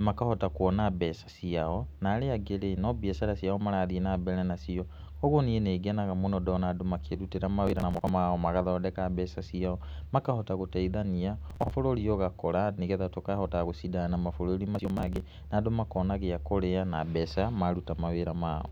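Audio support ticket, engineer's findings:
Processor overload crackle at 7.67–8.09 s (before "magathondeka mbeca"), 11.50–11.71 s (after "makahota gũteithania") and 14.75–15.20 s (after "na mabũrũri"). Host CPU missing runs of roughly 10 ms buffer deadlines. Skipped blocks leave hard-edged gaps that are heard as gritty tearing.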